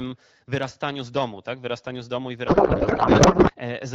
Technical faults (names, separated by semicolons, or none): codec payload misread